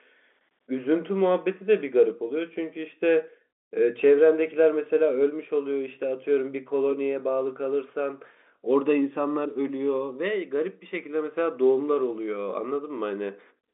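Nothing goes wrong anywhere in this bit of speech; it just sits in an ordinary G.711 telephone line with the usual narrow band that tops out around 3.8 kHz, and there's nothing more to report on the technical side.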